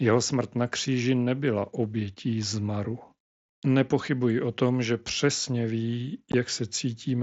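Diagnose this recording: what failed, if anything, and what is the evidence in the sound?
At 6.32 s the speech drops out for about 15 ms, the mark of unconcealed Bluetooth headset packet loss on the link from headset to phone, through the mSBC path. The gap points to two lost packets left as silence. The waveform goes flat with abrupt edges, and the spectrogram shows a blank column.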